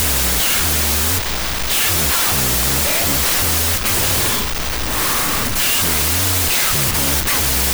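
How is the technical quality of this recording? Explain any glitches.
The quality is very poor, because one fault runs through the entire recording.

Wrong sample width affects the whole clip. The data appear to have been stored as 32-bit floats but read back as 16-bit integers, so each true sample is split into two bogus values built from mismatched bytes. The low-order halves become loud hiss, and only the high-order halves faintly carry the speech. Playback runs at 0.5× speed, an octave low. On a waveform this looks like a near-full-scale noise block. On a spectrogram it appears as a bright broadband wash with faint, compressed speech harmonics beneath.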